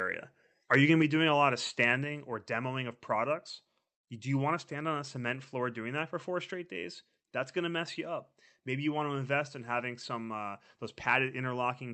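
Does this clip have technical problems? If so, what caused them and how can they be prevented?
Yes. Between 0.73 and 0.76 s, just before "you going to be", the peaks flatten and turn harshly crackly. This is microphone overload. The input gain was set so high that the loudest peaks ran about 4 dB past the converter's limit and had their tops cut off, likely at the interface rather than later in the chain. Only a small share of samples were affected, so the distortion is brief. To prevent it, lower the microphone or interface gain so that normal peaks sit well below full scale.

The microphone volume stepped down twice: at 1.02 s, between "you going to" and "be doing a lot", and at 2.04 s, between "doing a lot of" and "or demoing of products". Each time, the sound and its background fall abruptly by about 4 dB in a single step. The likely cause is the call software's automatic gain control reacting to the earlier overload by cutting the device's input volume, once and then again. 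To prevent this, set a correct fixed input level beforehand and turn off automatic microphone gain adjustment in the call client. The Opus call path also limits the audio to roughly 8 kHz, which is audible as a softened top end.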